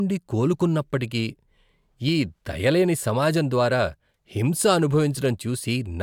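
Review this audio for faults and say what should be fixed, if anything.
No faults found; nothing needs fixing.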